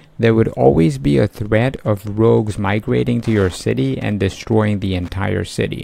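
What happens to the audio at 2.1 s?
At 2.1 s a faint ticking sits well below the sound: Wi-Fi interference, from 0.96 to 5.08 s. The audio circuit rectifies a nearby radio's beacon, sent every 102.4 ms, so ticks arrive about ten times a second, slower than the buzz of mobile-phone interference.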